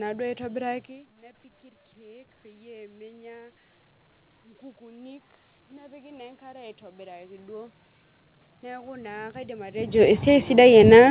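Automatic gain rising at 1.94 to 3.61 s, 4.78 to 7.8 s, and from 8.61 s to the end: the talker's level at the microphone dropped by about 21 dB, and the gain control slowly climbed to compensate, by about 4 dB and then about 7 dB. Each time, speech and room noise swell together over a second or more instead of holding steady. The talker also moves near 1 s and 9.5 s, which shifts the level.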